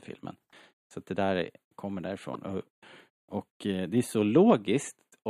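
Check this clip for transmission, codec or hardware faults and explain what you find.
One fault turns up: a corrupt frame decoded. At 2.34 to 2.36 s, just after "det där kommer", flipped bits in a couple of compressed frames were decoded anyway, misplacing energy into a brief chirp, squeak, blip or burst of noise peaking around -25 dBFS.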